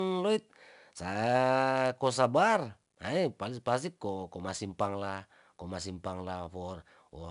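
From start to finish the speech carries 4-bit ADPCM compression: each sample is coded as a coarse step off a prediction, so a gritty hiss rides on every louder syllable and sharp attacks smear. Nothing reaches above 10.6 kHz, which fits a rate near 22 kHz and dulls things.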